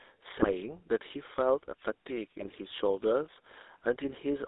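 From start to finish the speech has a buzzy, gravelly roughness, squeezed into a 300 Hz to 3.7 kHz band: GSM full-rate codec damage, fitting 13 kbps pulse-excited coding. At 0.39 to 0.51 s, and again at 2.40 to 2.50 s, the speech breaks into squawks and gargling. These are GSM bit errors: corrupted filter, pitch or gain values across several frames.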